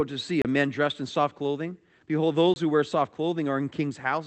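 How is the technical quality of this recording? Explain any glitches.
Technical quality suffers from timing trouble throughout, plus two short dropouts, heard over what sounds like a call codec path (the top end stopping near 8 kHz points to Opus in a narrower bandwidth mode).

Clock drift between sender and receiver runs the whole clip. The sender's clock seems roughly 4 percent fast, so the receiver's buffer keeps overfilling and has to shed audio.

Repeated timing corrections run from about 0.01 to 4.14 s. The receiver keeps trimming small chunks to keep up with a sender running at about 104 percent, so you get uneven little hiccups and a slightly jittery pace.

There are two blocks of digital silence, from 0.42 to 0.45 s (about 30 ms) and from 2.54 to 2.56 s (about 21 ms, which fits a 1024-sample buffer). Each time the audio drops hard to silence and back with no fade. You hear a short hole.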